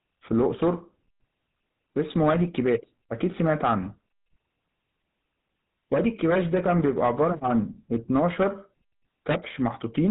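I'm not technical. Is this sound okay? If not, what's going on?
No, not quite. From start to finish the speech has that buzzy, gravelly edge you'd recognise from an old mobile phone call, and that's exactly what it is: the GSM full-rate codec. It squeezes the voice down by rebuilding it from a rough model of the mouth and throat, fed with evenly spaced pulses instead of the real signal. Everything above 4 kHz is gone, so it sounds muffled, and the roughness is plainly audible throughout.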